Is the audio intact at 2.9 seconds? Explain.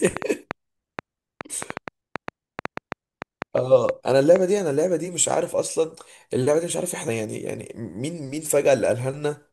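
No. A train of clicks runs from 0.07 to 4.37 s, likely from interference or a faulty connection, adding about 4.7 unevenly spaced, loud ticks per second.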